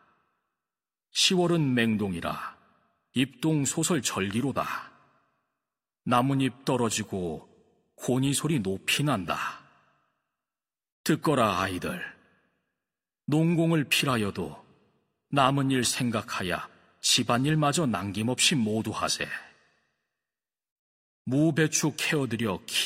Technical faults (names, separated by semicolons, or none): none